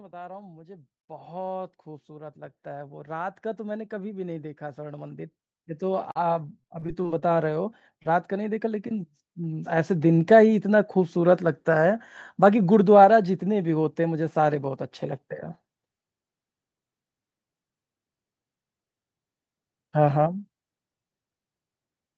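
From 0.1 s to about 11.2 s the level climbs steadily by about 21 dB. This is automatic gain rising: the gain control judged the input too quiet and kept raising its gain. The speech and the background noise swell together. That sets it apart from someone moving closer to the microphone, which would bring the voice up more than the room. The slow, continuous climb also rules out a sudden step in level.

At 6.11 to 6.17 s there is a short stall from a late packet. A packet arrived about 40 ms behind schedule, and the jitter buffer ran dry. The receiver held the last sound for those 40 ms and then picked up exactly where it left off. Nothing is missing, which is what distinguishes it from real loss. The sound is simply drawn out for an instant, with a slight buzz or dip.

Between 6.61 and 7.24 s comes repeated packet loss, which gives the sound a robotic quality. Seven separate holes, none longer than 23 ms, add up to about 120 ms of lost audio. 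Each one was patched by extending the previous sound, so roughly a fifth of the stretch is synthetic. Unlike the single stall, the gaps come in quick succession. The result is a choppy texture with fragments of speech genuinely gone.

At 8.03 to 8.07 s there is one short concealed packet loss. About 20 ms never reached the decoder in time. The gap was filled by continuing the preceding sound, then blended back into the real signal. It is heard as a single brief smear or wobble rather than a run of artefacts.

All of this sits within the band limit of the Opus call path, which carries nothing above 8 kHz.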